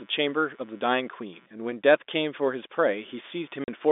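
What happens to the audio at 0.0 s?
From 0.0 s the speech already carries computer activity noise, a faint buzz from processor or mouse load shifting the audio ground, pulsing at around 150 Hz roughly 35 dB below the speech. A spectrogram shows fine regular vertical striations ignoring syllables, and the waveform a low ripple in pauses.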